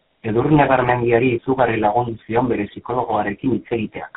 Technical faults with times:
0.00-4.17 tandem speech coding

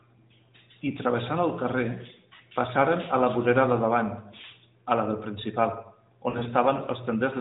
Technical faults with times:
2.36-2.41 lost AMR speech frames
6.30-6.48 lost AMR speech frames

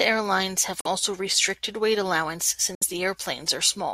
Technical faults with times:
0.81-0.87 Bluetooth dropout
2.75-2.83 Bluetooth dropout

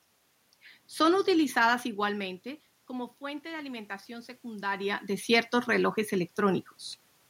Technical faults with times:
2.00-5.11 automatic gain rising

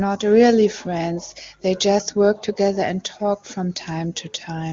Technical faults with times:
none

